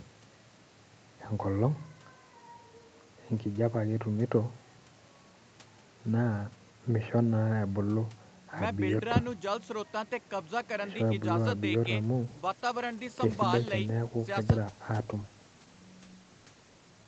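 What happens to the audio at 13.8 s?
At 13.8 s the call is in a bitrate drop that runs from 12.23 s to the end of the clip. The bandwidth estimate fell and Opus was pushed from 64 down to 15 kbps, so it codes the speech much more coarsely and the sound turns rough and watery.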